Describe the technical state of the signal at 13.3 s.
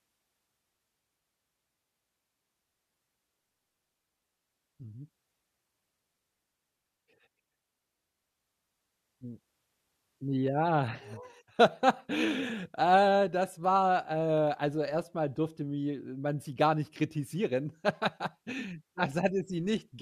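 At 13.3 s the speech signal is intact, with no audible dropout, distortion, glitch or other fault.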